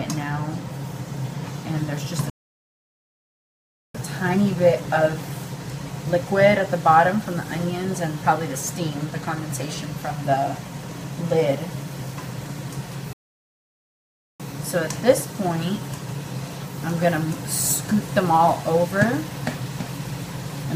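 The player likely ran dry or was blocked, causing a playback stall: silence from 2.30 to 3.95 s (1.65 s) and from 13.13 to 14.40 s (1.27 s), each cutting the sound off mid-flow.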